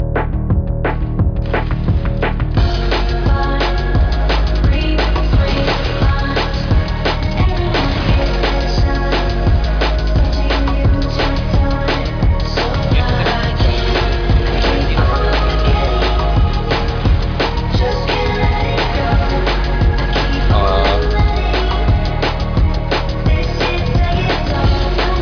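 No technical faults are audible.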